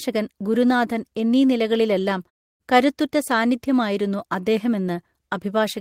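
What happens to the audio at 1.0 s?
Nothing goes wrong at 1.0 s; the speech is intact at that moment.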